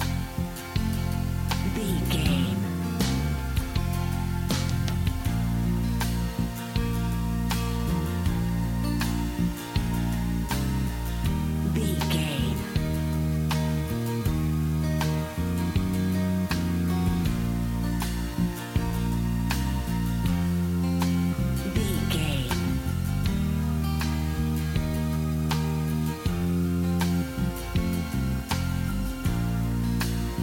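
From start to finish, the audio carries low bit depth with dither. It was reduced to about 6 bits, with dither added before rounding. The rounding error becomes a steady, even hiss, roughly 20 dB below the signal. There is no harsh distortion.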